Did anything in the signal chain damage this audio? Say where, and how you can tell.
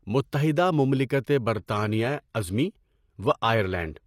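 Yes. At the network and codec stage, the speech switches abruptly at 1.55 s to an adaptive stream at a lower bitrate and stays there to the end. There is no gap, but the quality drops at once: the treble thins and turns synthetic, with nothing above 15 kHz and more codec artefacts. The sound fits a move from roughly 96 kbit/s AAC to 24 kbit/s HE-AAC, where the top band is rebuilt rather than coded, after the connection slowed.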